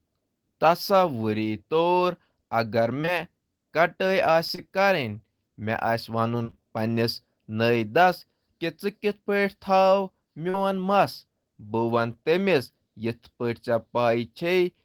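Short concealed packet loss occurs at 3.01 to 3.09 s, 4.47 to 4.60 s and 10.50 to 10.56 s. Roughly 20 to 40 ms of audio at a time never arrived, consistent with 20 ms packets, and the receiver bridged each hole by extending the preceding sound. Each is heard as a quick smear or wobble in the speech.

Repeated packet loss, with a robotic sound, runs from 6.44 to 6.62 s. Several gaps of up to 24 ms, about 80 ms in total, arrive in close succession, and nearly half of that stretch is synthesized fill rather than real audio. The speech turns choppy, with fragments missing.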